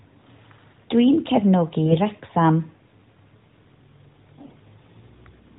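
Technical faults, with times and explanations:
1.86–1.98 s and 4.42–4.59 s, AMR bit errors: both short bursts turn the speech hoarse, scratchy and gargly while pitch and level roughly hold. Around 7 percent of the lightly protected bits are flipped, misplacing the excitation pulses and skewing fine pitch, gain and spectral values.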